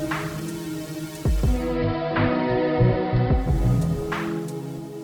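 At 1.49 s the receiver drops its digital stream and blends to analogue, a 313 ms cross-fade onto the AM feed. The treble dulls, a faint hiss creeps in, and the level shifts by about 2 dB until it returns at 3.62 s.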